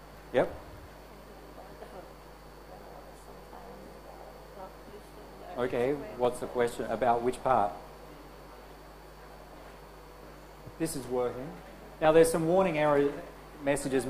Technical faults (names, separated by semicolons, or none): clock drift buffer slips